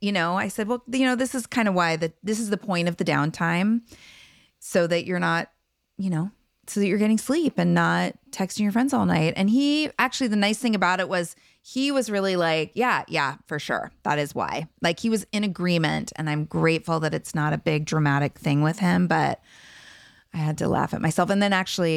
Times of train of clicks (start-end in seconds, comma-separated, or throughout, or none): none